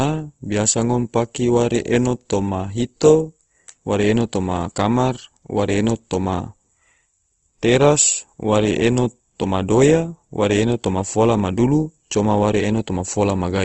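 Speech, and the whole thing carries plainly audible codec damage: the voice sounds grainy and rough, with a noisy, sandy texture where the finer detail should be, and everything above about 8.1 kHz is simply gone, so it's a bit dull on top. That's likely Opus compression in its music-style mode. The encoder keeps each band's energy but patches the missing detail with folded or noise-filled content, and the cut-off fits a wideband setting at a low rate around 16 kbps.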